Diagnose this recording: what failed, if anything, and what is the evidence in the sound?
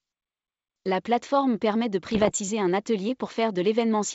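The transmission link failed. Bit errors on the ADPCM link cause pops and rough bursts with brief level jumps from 2.11 to 2.33 s. Each flipped bit upsets the decoder's step size and predictor, so the damage rings on for milliseconds.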